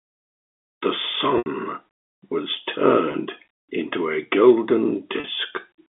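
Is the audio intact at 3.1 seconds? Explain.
No. From 3.12 to 3.14 s, packet loss with pitch repetition bridges a 20 ms gap by repeating the last pitch period, leaving a briefly held, buzzy sound rather than a silent dropout.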